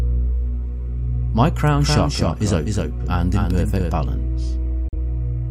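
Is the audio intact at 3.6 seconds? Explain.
No. At 3.6 seconds the audio carries a doubled audio track, which runs from 1.76 to 3.92 s. A second, full-band copy of the same sound sits roughly 300 ms behind the original and about 5 dB quieter, with no decay or room colour, so it reads as a dry, flat repeat rather than an echo. It likely comes from the signal being captured again through a slower path, and it cuts in and out abruptly at both ends.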